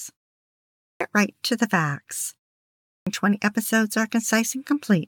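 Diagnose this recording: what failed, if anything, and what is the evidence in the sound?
Playback stage: a clipped start after a pause, twice. After 0.68 s of silence, 235 ms vanishes (0.77–1.01 s) before "right to the facts". After that phrase and a 0.49 s pause, 266 ms goes (2.8–3.07 s). The output device sleeps in silence and wakes late.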